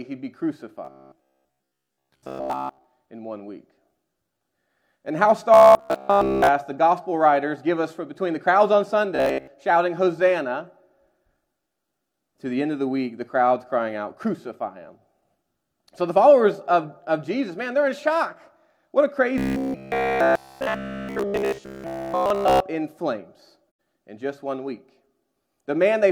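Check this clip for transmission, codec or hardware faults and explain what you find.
Two kinds of fault turn up: a robotic buzz in four stretches, and one brief muted gap near the end.

Robotic sound from repeated short buffers occurs at 0.85–2.84 s, 5.54–6.48 s, 9.16–9.47 s and 19.38–22.60 s. The audio turns into a rigid, metallic drone pitched at 66.7 Hz. In the second and fourth stretches it is almost entirely repeated material, and in the other two it is roughly two-thirds repeated. The likely cause is audio arriving too seldom, so the playback side loops the last snippet while real audio is skipped. The 66.7 Hz pitch fits a 15 ms repeated buffer.

AAC frame loss with muting occurs at 23.66–23.79 s. A 128 ms hole fades out and back in softly. The decoder zeroed the missing frames, and its overlapping windows smoothed the edges. The gap's length points to about three lost frames.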